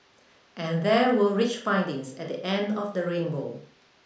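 No technical faults can be heard anywhere in the recording; the signal stays intact and continuous throughout.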